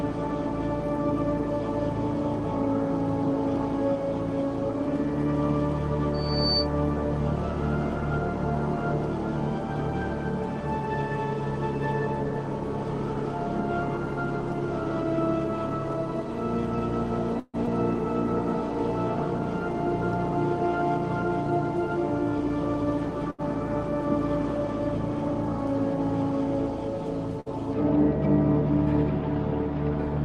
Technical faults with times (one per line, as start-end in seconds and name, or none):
6.14-6.68 loudspeaker feedback squeal
17.39-17.56 call audio freeze
17.66-17.69 short concealed packet loss
23.30-23.41 short stall from a late packet
27.40-27.48 burst of packet loss